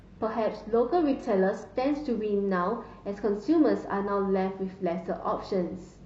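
Up to 2.0 s the speech sounds thin, with missing or synthetic treble and stronger codec artefacts. That's an adaptive stream starting at a low bitrate, fitting roughly 16 kbit/s HE-AAC. At 2.0 s it steps up, without a gap, to fuller sound suggesting 96 kbit/s AAC-LC.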